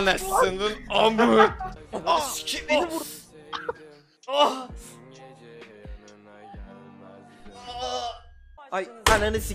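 Nothing here trips the ear at any point; it all just rolls along the way it should.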